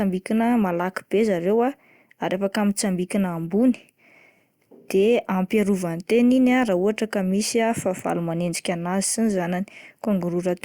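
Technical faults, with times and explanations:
No technical faults are audible in the speech, and the signal holds steady in level, continuity and timing throughout.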